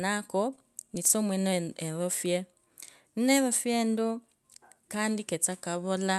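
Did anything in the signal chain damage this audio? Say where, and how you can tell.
Yes, the damage happens at the network and jitter-buffer stage, as repeated stalls (stutter) between 0.55 and 1.59 s. Across that second there are about nine tiny hitches, none longer than 20 ms, adding up to roughly 104 ms of held-over sound. Nothing actually drops out. Packets were arriving late, so the buffer kept running dry and the receiver stretched the last sound to cover each gap, which makes that stretch drag and stutter.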